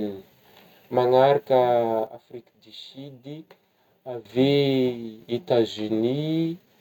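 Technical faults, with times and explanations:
2.07–4.25 s, sudden gain jump: speech and background noise drop together by about 12 dB in one step, then jump back, likely an unramped gain change, not a fade.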